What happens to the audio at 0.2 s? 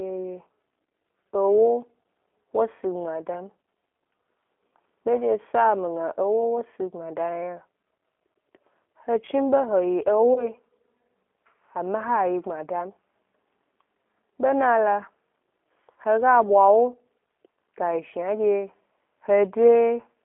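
At 0.2 s the speech already sounds thin, boxy and slightly buzzy, with a rough, synthetic edge. That character runs through the whole clip: G.729 codec damage. The band is held to roughly 250 Hz to 3.4 kHz, so there is no low body and no air above. The codec rebuilds each 10 ms frame from a vocal-tract filter, a pitch predictor and a few pulses rather than the real waveform, which fits an 8 kbit/s G.729A link.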